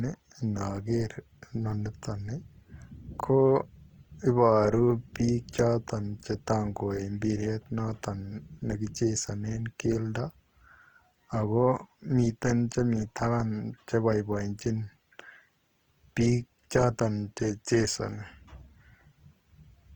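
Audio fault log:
Throughout: Opus compression. The speech has a rough, grainy texture from plainly audible codec damage, though the bandwidth stays full up to 20.2 kHz. The likely cause is a music-mode encoder short of bits, filling bands with folded or noise-like content, which fits a 24 kbps stream.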